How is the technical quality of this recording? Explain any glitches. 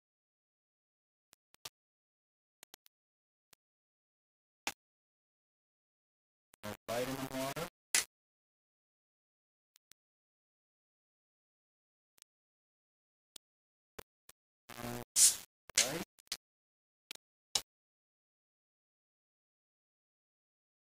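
The technical quality is poor, with one problem running the whole way through. From start to finish there's a grainy, gritty distortion that moves with the sound, and that's likely low bit depth without dither. It sounds like only about 5 bits, rounded with no dither, so the error tracks the signal instead of sitting as steady hiss. The distortion is only around 10 dB below the signal, so quieter passages get coarse, and the faintest parts sputter or drop out.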